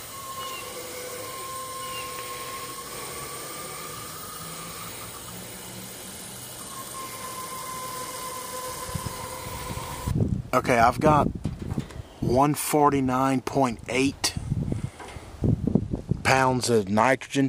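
From 5.68 to 9.04 s, and again from 15.68 s to the end, the treble dulls and a gritty noise rises. This is a Bluetooth SBC bit pool drop. Link congestion starved the upper sub-bands and coarsened the rest, which fits a fall to around 102 kbps.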